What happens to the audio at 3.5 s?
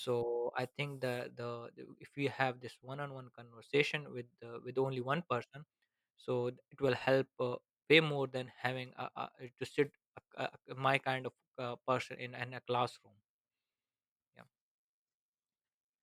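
Nothing goes wrong at 3.5 s; the speech carries on intact there, with no dropout, click, glitch or other fault.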